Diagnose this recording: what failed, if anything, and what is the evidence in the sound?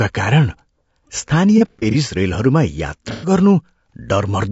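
Codec stage: the speech sounds rough and grainy throughout, with noise filling between harmonics. A spectrogram shows blurred harmonics and a synthetic-looking top band, likely from low-delay AAC compression at a rate that fits 32 kbps.

Network stage: AAC frame loss with concealment from 1.58 to 1.96 s (about 150 ms missing, longest gap near 70 ms) and 3.11 to 3.31 s (120 ms). The decoder repeated spectra, leaving smeared, noisy patches visible as flat blocks.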